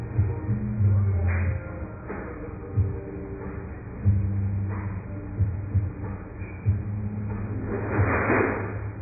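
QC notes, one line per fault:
throughout: AAC compression. The sound is dull and smeared, with nothing above 2.5 kHz and a warbling, fizzy texture from heavy coding damage, likely from AAC-LC encoding at a very low bitrate, which fits about 12 kbps. With so few bits, the encoder discards the upper band and quantises the rest coarsely, blurring detail. A spectrogram shows a hard ceiling at 2.5 kHz with patchy, blocky holes beneath it.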